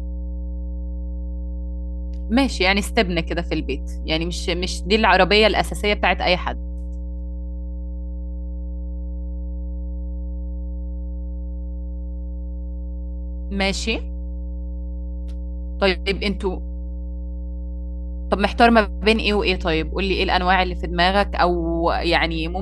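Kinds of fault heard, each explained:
Mains hum: a steady, low tone runs under the speech for the whole clip. It sits at 60 Hz and is loud enough to be plainly heard, roughly 10 dB below the speech itself. The power line is leaking into the signal path, either through a ground loop between connected pieces of equipment or from a transformer near the cables. The 60 Hz pitch points to equipment running on a 60 Hz mains supply.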